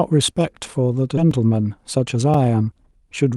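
At 1.17 to 1.19 s the speech skips ahead. Roughly 0.7 s of audio is dropped and the two sides are joined almost directly, so unlike a dropout there is no audible gap. At 1.31 s a block of digital silence about 2.7 ms long, which fits a 128-sample block, cuts in and out with no fade and is heard as a tick or dip rather than a missing stretch. From 1.75 to 2.15 s a jitter buffer speed-up removes about 40 ms in short slices, and the speech runs about 8% fast at unchanged pitch, unlike a tape-style speed change. At 2.34 s a second block of digital silence, 4.5 ms long, gives another tick.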